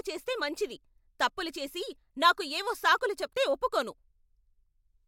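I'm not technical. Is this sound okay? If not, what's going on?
Yes, this recording sounds fine, with no technical problems to point out. Nothing in it needs fixing or explaining.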